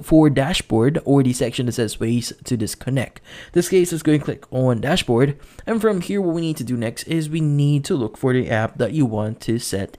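No technical faults can be heard anywhere in this recording. Nothing in it breaks, drops out or distorts at any point.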